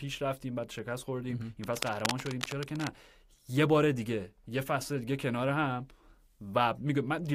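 A speech recording with cable scratch noise from 1.64 to 2.90 s: dense, irregular crackling and rustling sits over the speech at roughly 10 dB below it. This is likely a worn cable or connector being moved, its contact resistance fluctuating rapidly.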